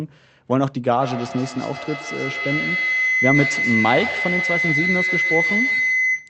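From about 1.01 s a feedback howl takes over and keeps going right to the end of the clip. What's happening is that a second device in the same room is on the call, so the mic picks up the speaker output, sends it round again, and each trip comes back a bit louder. The loop settles on a tone somewhere near 2 kHz, pulsing roughly every 150 ms, and climbs until it's about as loud as the speech itself.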